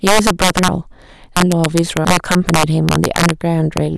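A speech recording with two faults. Integer overflow runs through the whole clip. The signal is driven about 8 dB past full scale, and instead of being limited, the loudest peaks wrap around to the opposite sign. This affects only a small fraction of samples, around one or two percent. The result is sharp, violent cracks on the louder syllables, harsher and more abrupt than ordinary clipping, because each overflowing peak jumps across the entire range rather than flattening at the top. Between 0.68 and 2.05 s the chunks are out of order. The audio is handled in blocks of about 0.68 s, and one block arrived one position late, so the two blocks in that span play in swapped order. No audio is lost, but the phrase sounds jumbled, with three hard joins near 0.68, 1.37 and 2.05 s.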